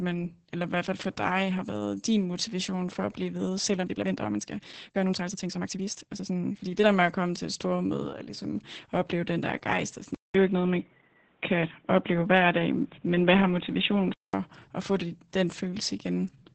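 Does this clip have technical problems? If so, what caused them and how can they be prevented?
Yes. Opus voice compression runs throughout the speech. The codec stays in its SILK linear-prediction mode at a wideband setting, and nothing above 8.7 kHz survives. The excitation is coded very coarsely, which fits a bitrate around 10 kbps. The result is heavy codec damage: voices come out muffled, hoarse and slightly robotic, with a burbling texture on anything that isn't plain speech. To prevent it, encode at a higher bitrate, around 24 kbps or more for voice.

A time-stretched section runs from 3.76 to 6.88 s, starting right after "for at blive ved" and ending just before "med at komme til". The pace jumps to about 1.73 times normal while the pitch stays put, so the passage sounds rushed. This is likely software squeezing the segment to fit a set length by dropping short slices of audio. To prevent it, edit or trim for length instead of forcing a tempo change on the audio.

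An input switch to a poorer device begins at 10.15 s, right after "der rejst og sådan", and lasts until 14.34 s. At the switch there is a silence of about 200 ms. After it, the band narrows, so the sound turns dull and boxy, shifts in level by about 5 dB, and carries a faint new noise floor well below the signal. The likely cause is the system jumping to another microphone or a headset's call profile. To prevent it, lock the recording input to one device and disable automatic device switching.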